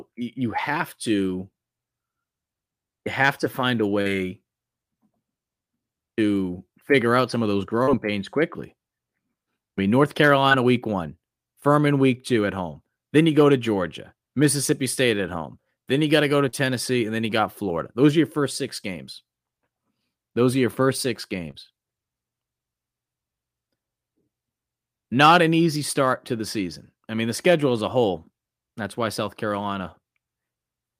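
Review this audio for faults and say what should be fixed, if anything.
Short concealed packet loss occurs five times, at 4.01–4.07, 7.83–7.89, 10.49–10.53, 16.49–16.55 and 21.51–21.56 s. Each time, about 40 ms of the call arrived too late for the decoder (20 ms at 10.49 s), so the receiver filled the gap by extending the preceding speech and blending back in. Each gap is heard as a brief smear or wobble, and a short consonant may drop out. Adding jitter-buffer headroom or forward error correction on the network path would prevent these losses.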